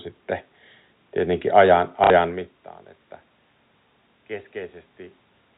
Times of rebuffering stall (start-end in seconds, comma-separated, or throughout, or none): none